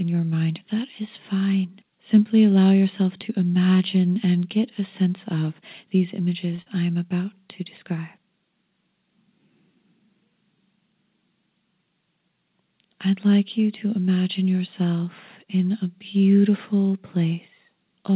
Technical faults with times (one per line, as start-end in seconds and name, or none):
6.56-6.61 short stall from a late packet
6.62-6.69 short concealed packet loss